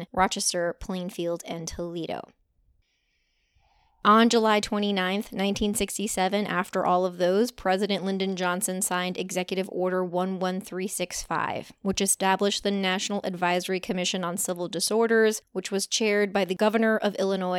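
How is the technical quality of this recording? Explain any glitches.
Nothing here glitches or drops out; it's a straightforward speech recording with no technical faults to point to.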